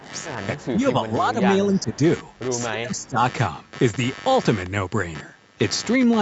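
A computer activity noise buzz runs under the speech throughout, pulsing about 100 times a second at about 20 dB below the signal. Load changes in the computer are shifting the audio ground, and a spectrogram shows evenly spaced vertical striations across the whole clip.

The speech is suppressed in double talk at 0.0–0.09, 0.55–0.8, 1.0–1.39, 1.82–1.98 and 2.7–3.18 s, dipping by about 10 to 20 dB. The deepest dip is at 2.7 s. The waveform envelope sags abruptly in these spots, most likely because the echo canceller turned the talker down while the far side was speaking.

Between 1.73 and 1.97 s there is an echo leak. A faint copy of the speech returns 284 ms late, about 30 dB down. On a spectrogram it appears as a weak, delayed ghost of the earlier pattern. Its likely cause is loudspeaker pickup that the far end's echo canceller failed to remove.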